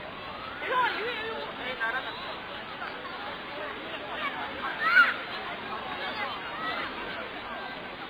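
From start to finish, the audio has almost nothing above 4.9 kHz, and what remains has been coarsely reduced. The likely cause is heavy AAC compression, with an AAC-LC encoder starved of bits at a rate that fits something near 16 kbps. To stay within budget, the encoder lowered its bandwidth and quantised the surviving frequency lines crudely. The result is a dull, boxed-in sound that smears transients and gives sustained or hissy parts a watery, swirling texture.

Also throughout, there is sample clock jitter. The converter's timing wandered by something on the order of a microsecond or two, so each sample was captured slightly early or late. Where the waveform changes fastest, that timing error becomes an amplitude error, here at roughly 40 dB below the signal. It is heard as a faint grainy hiss riding on the sound that grows with louder and brighter moments and drops away in quiet stretches.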